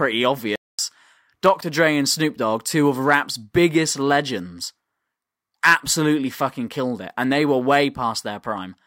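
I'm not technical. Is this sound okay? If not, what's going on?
No, there are two problems. First, a playback stall: at 0.56 s the speech cuts out for about 0.23 seconds, until 0.79 s, then carries on. The player likely ran short of data or got held up for a moment and went quiet while it caught up.

Second, CD scratch ticks: between 1.46 and 1.78 s you'll hear three very brief ticks, each just a fraction of a millisecond. A scratch on the disc wiped out a bit of data each time it came round, and the player patched over the gaps.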